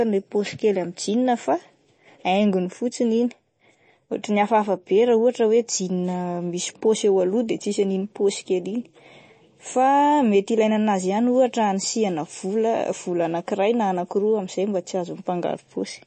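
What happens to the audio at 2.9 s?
At 2.9 s the speech carries plainly audible MP3 compression, present throughout the clip: nothing above about 8.3 kHz, and a watery, swirling texture where weak frequency lines flicker between frames. This likely comes from a low bitrate, consistent with 32 kbps. That swirl is what separates it from a simple low-pass filter.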